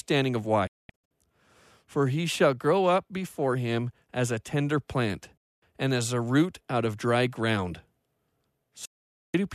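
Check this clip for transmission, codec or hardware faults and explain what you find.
The speech has three digital broadcast dropouts: from 0.67 to 1.11 s (about 360 ms silenced in several short holes, the longest 216 ms), from 5.37 to 5.63 s, between "as a tender plant" and "and as a root", and from 8.85 to 9.35 s. The receiver muted whole frames that failed to decode, fitting frames of about 24 ms, with an 8 ms fade at each edge. Unlike a codec packet-loss concealment fault, nothing is smeared or repeated. The sound simply vanishes and resumes further on.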